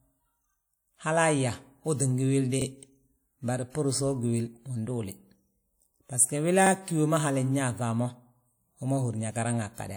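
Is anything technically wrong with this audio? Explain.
Yes. The speech has overlapping chunks, heard twice: at 2.62 to 2.67 s and again at 6.67 to 6.71 s. The audio appears to have been handled in blocks about 4 s long, with each new block starting roughly 48 ms before the previous one finished. That short stretch therefore plays twice at each join, producing a brief stutter at the seam, spaced about 4 s apart.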